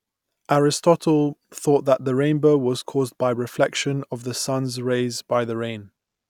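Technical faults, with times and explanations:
No technical faults can be heard anywhere in this speech recording, and the signal stays steady and intact all the way through.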